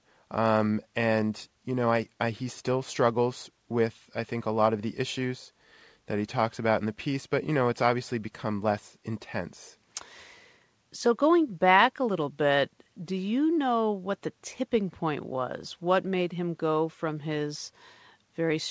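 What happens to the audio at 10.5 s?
Nothing goes wrong at 10.5 s: the speech carries on intact through the call path, with the usual band limit that leaves nothing above 8 kHz.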